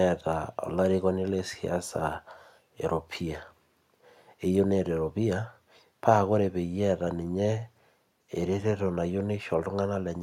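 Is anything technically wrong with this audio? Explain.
No, nothing technically wrong stood out on listening to this speech recording.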